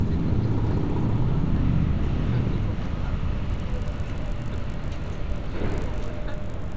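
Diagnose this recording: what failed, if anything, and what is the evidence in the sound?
From 3.46 s to the end, a steady 50 Hz buzz rides on the sound, heard only while there is signal. This is a resampler restarted on every block, at the sample-rate conversion stage, likely converting 44.1 kHz down to 16 kHz. The converter handled each 20 ms block in isolation, lacking the true neighbouring samples at the block edges, so every boundary carries a small error. Repeating fifty times a second, those edge errors fuse into the buzz.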